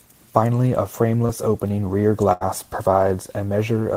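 At about 1.25 to 1.31 s, just before "opening rear", there's a short concealed packet loss. Roughly 40 ms of the call arrived too late, and the receiver bridged it by stretching the last bit of sound, so you get a quick smear before the speech carries on.

Then at 2.33 to 2.43 s, right after "opening rear", comes a burst of packet loss, about 80 ms lost in a row. The receiver held the previous sound and faded it out, so it's a brief dying buzz or hiss, and that stretch of speech never comes back.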